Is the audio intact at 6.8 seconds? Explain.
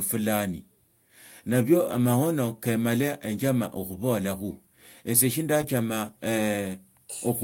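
Yes, the speech at 6.8 seconds plays through intact, with no fault at that moment.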